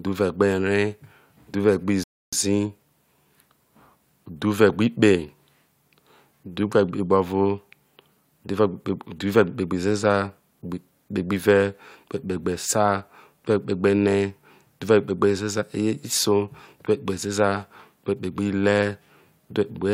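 At about 2.04 s the speech hits a rebuffering stall: the player ran dry of downloaded audio, so everything drops to silence for roughly 0.29 s until more data shows up, then picks up exactly where it paused. Nothing's missing, it just adds that gap.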